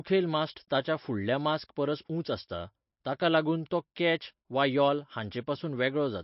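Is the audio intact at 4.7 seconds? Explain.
No. At 4.7 seconds, as throughout the clip, the speech sounds watery and swirly, and nothing is present above 5.6 kHz, so the top end is dull. This is likely MP3 compression with plainly audible codec damage, at a bitrate that sounds like around 32 kbps. Short of bits, the encoder drops weaker frequency lines, which flicker on and off from frame to frame, and it cuts the treble at a fixed frequency.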